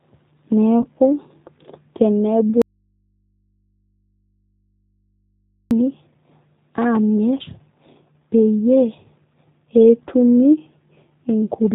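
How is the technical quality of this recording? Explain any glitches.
The technical quality is poor, with three distinct problems.

Throughout, the speech carries G.729 codec damage. This low-rate VoIP codec runs at 8 kbit/s. It rebuilds speech from a vocal tract model and sparse pulses, and discards everything above 4 kHz. The result sounds muffled, rough and plainly synthetic.

From 0.82 to 0.87 s, a brief VoIP packet loss is concealed by the speech codec. About 20 ms of audio went missing. The decoder filled the hole by extending its last frame, and the next frames are briefly weak or distorted until it recovers.

From 2.62 to 5.71 s, there is an audio dropout to a faint residue. The speech cuts out abruptly for about 3.1 s. Only mains hum remains, about 50 dB below the speech. The likely cause is a lost signal feed while the input stayed live.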